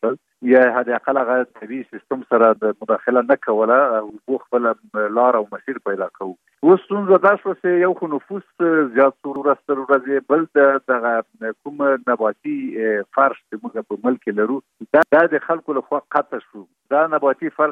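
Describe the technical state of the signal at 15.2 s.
At 15.2 s the signal is inside a repeated-frames fault spanning 15.03 to 15.21 s. A block of about 186 ms, which fits a pair of compressed frames, was delivered twice, so the decoder plays the same stretch of sound again. It is heard as a stutter and lengthens the audio by 186 ms.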